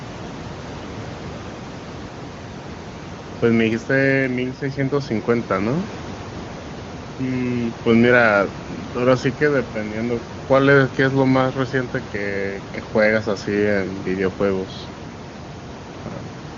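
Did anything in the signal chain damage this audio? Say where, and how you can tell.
No, nothing in the signal chain stood out as damaging this audio on listening.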